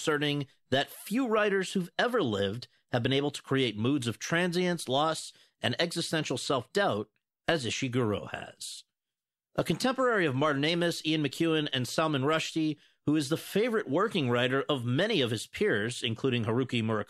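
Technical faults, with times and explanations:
Nothing stood out as a technical fault on listening to this speech recording.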